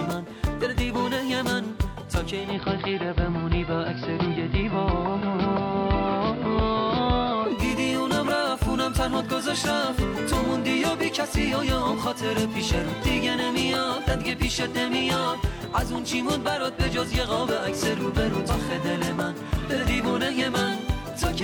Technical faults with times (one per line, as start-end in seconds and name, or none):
2.27-7.73 digital radio blending to analogue